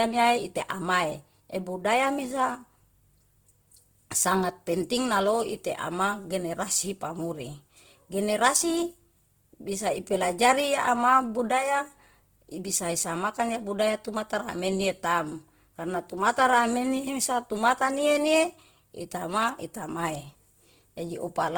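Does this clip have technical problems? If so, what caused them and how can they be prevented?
Yes. Throughout, Opus compression in its CELT mode likely ran short of bits, fitting roughly 16 kbps, so noise-filled bands make the speech grainy and rough. Encoding at a higher Opus bitrate, such as 32 kbps or more, would prevent this.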